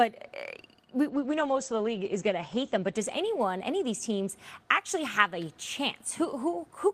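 At 1.11 s there's a call bitrate drop: the bandwidth estimate fell and the encoder got starved of bits, so the sound goes coarse and watery. Everything above 8 kHz disappears, so the top end is gone and it turns muffled. The degradation fits a fall from around 32 kbps to about 13 kbps, bottoming out for roughly 1.6 s, then the sound recovers by 4.43 s.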